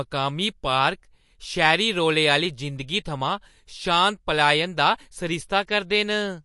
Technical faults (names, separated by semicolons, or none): MP3 compression